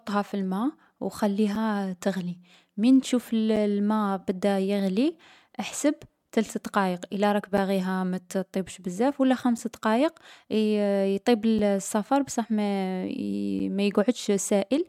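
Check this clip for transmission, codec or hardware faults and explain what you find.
One fault is present: a gap between chunks, recurring seven times through the speech.

The audio was delivered in 2.0 s chunks, and each join leaves about 6.5 ms of silence, at 1.55, 3.56, 5.57, 7.57, 9.58, 11.59 and 13.59 s. Nothing is dropped, but the speech is broken by brief, hard-edged holes at a steady two-second rhythm.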